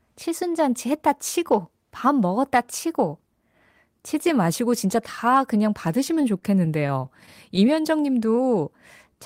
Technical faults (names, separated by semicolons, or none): repeated stalls (stutter); jitter buffer slow-down